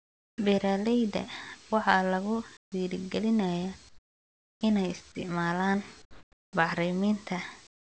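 Comfort noise replaces the background in five pauses: 0 to 0.38 s, 2.57 to 2.72 s, 3.89 to 4.61 s before "inay isticmaalaan", 6.02 to 6.53 s after "inay isticmaalaan", and 7.67 to 7.82 s. The real room sound gives way to a flat, featureless hiss. It is about 26, 20, 20, 10 and 23 dB quieter respectively. The likely cause is discontinuous transmission, with the receiver synthesising noise during silence. The speech itself carries nothing above 8 kHz, which fits a wideband call codec.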